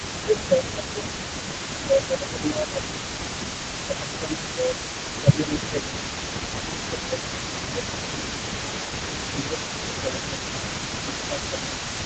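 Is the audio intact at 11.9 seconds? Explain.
No. Between 10.97 and 11.98 s the speech is suppressed in double talk: the level sinks by roughly 10 dB. This is likely an echo canceller that could not tell this talker from the returning echo and turned both down. Unlike a codec dropout, it tracks the overlap rather than cutting cleanly.

An echo leak also runs through the whole clip: a delayed copy of the speech trails about 0.46 s behind, roughly 10 dB quieter. This likely comes from far-end loudspeaker sound that escaped cancellation. Its fixed lag distinguishes it from room reverberation.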